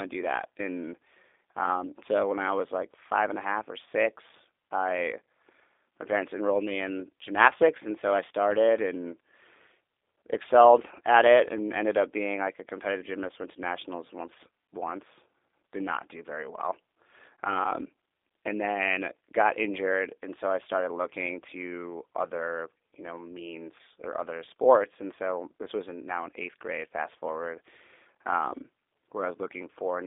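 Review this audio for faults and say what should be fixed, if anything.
G.729 codec damage runs through the whole speech recording and is plainly audible. The voice is rebuilt from a vocal tract filter, a pitch predictor and sparse pulses in each 10 ms frame, which fits an 8 kbit/s G.729A stream, so it sounds rough and slightly synthetic. The line band runs from 300 Hz to 3.6 kHz. On a spectrogram, energy stops sharply at 3.6 kHz, the region below 300 Hz is empty, and the harmonics look smeared and blocky from frame to frame. To prevent this, record or route the call through a wideband codec such as G.722 or Opus, or capture the audio locally before it reaches the narrowband VoIP link.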